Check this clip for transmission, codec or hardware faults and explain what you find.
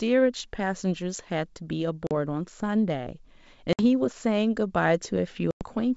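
Three dropouts from packet loss on an ADPCM call sit on the G.722 wideband speech: silent gaps near 2.07 to 2.12 s (about 40 ms lost), 3.73 to 3.81 s (60 ms) and 5.51 to 5.64 s (100 ms). Each hard-edged hole desynchronises the decoder's adaptive predictor and step size, so speech resumes briefly distorted.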